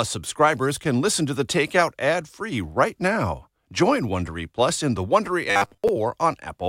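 A speech clip with robotic sound from repeated short buffers between 5.51 and 5.89 s. The voice turns into a rigid, metallic buzz at 100 Hz. Most of that stretch is repeated material. The likely cause is a 10 ms block looped while new audio arrived too slowly.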